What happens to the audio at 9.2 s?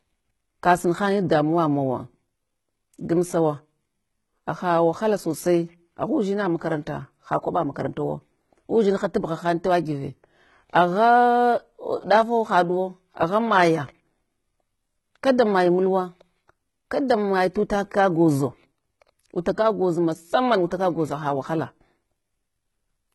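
At 9.2 s you're hearing the same thing that runs through the whole clip: a heavily coded sound with nothing above about 11.8 kHz and a synthetic-sounding top end, likely HE-AAC compression at a low rate, around 16 kbps. The treble is rebuilt by copying lower bands upward, so the s sounds come out gritty and metallic.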